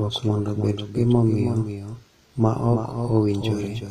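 From the start, the speech is heard twice. A second full-band copy trails about a third of a second behind, a few decibels quieter. It has no decay or room colour. This is a doubled audio track, likely from a slower second capture path.

Throughout, the treble sounds bright but false, and s sounds turn gritty and lispy. Nothing is present above 14.9 kHz. This points to HE-AAC compression at a low rate, likely around 24 kbps, with upper harmonics rebuilt from copied lower bands.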